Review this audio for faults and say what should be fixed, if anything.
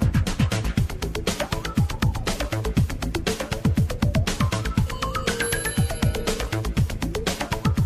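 Nothing stood out on listening, so there is nothing here that calls for a fix.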